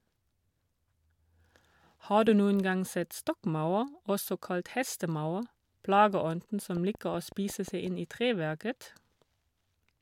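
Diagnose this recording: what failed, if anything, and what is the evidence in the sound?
A train of clicks, seven or so evenly spaced pops at 5.5 per second, ticks from 6.77 to 7.88 s before "inn i treverket", likely from analogue-wiring interference.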